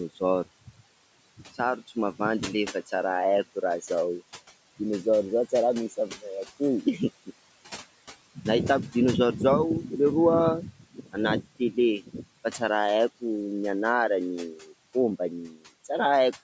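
Right through the speech there are noise suppressor artifacts: the background gets pulled down about 18 dB between phrases, then rises again underneath the talking. Next comes speech cut by the noise suppressor at 10.8–11.17, 11.41–11.78, 11.98–12.27, 14.54–14.72 and 15.41–15.68 s. It took quiet speech for noise and ducked it about 18 to 19 dB (about 10 dB at 14.54 s), so those bits sound swallowed.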